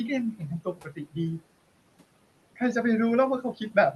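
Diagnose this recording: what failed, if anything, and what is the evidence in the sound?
Call processing is at fault: noise suppressor artifacts run through the whole clip. The room noise, about 19 dB below the speech, is pulled down by about 18 dB in the gaps and swells back under speech. Codec coding noise wouldn't pump with speech activity like this.

Speech cut by the noise suppressor appears between 0.62 and 1.17 s. Roughly 300 ms of quiet speech is treated as noise and sinks by up to about 18 dB, matching the suppression depth. Packet loss through the Opus call path would instead produce abrupt gaps or concealment artefacts.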